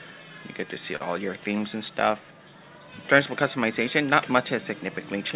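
At 0.96 s a short stall from a late packet occurs. The jitter buffer ran dry, so the last sound is held about 41 ms until playback resumes at 1.02 s.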